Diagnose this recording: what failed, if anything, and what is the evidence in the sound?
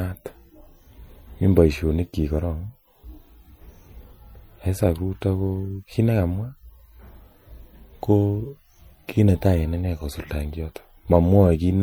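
MP3 compression damage runs throughout the recording, a fault at the codec stage. The speech sounds watery and swirly, with a dulled top end, which fits an MP3 encode at about 64 kbps. The likely cause is bit starvation switching weak frequency lines on and off between frames.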